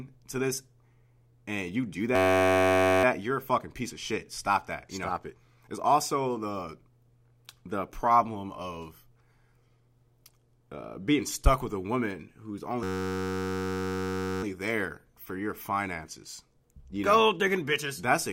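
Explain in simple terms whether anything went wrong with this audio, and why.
Twice the sound freezes into a steady buzz. This is a system hang loop. The computer stalled while the sound hardware kept replaying one tiny slice of audio, about 10.67 ms long, roughly 94 times a second. That fits a 512-sample buffer. The first buzz runs from 2.16 to 3.04 s, after "and you do" and before "you're a fucking piece". The second runs from 12.83 to 14.43 s, just before "there for your finances". Almost nothing is missing afterwards.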